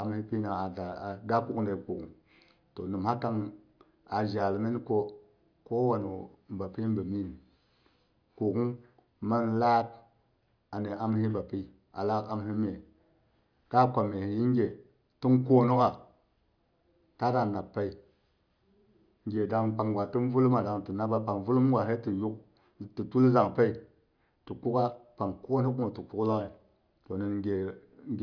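Speech recording with no audible technical faults.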